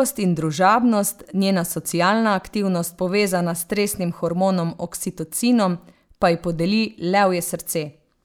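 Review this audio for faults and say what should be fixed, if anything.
Nothing needs fixing: the speech signal holds steady throughout, with no audible defect at any point.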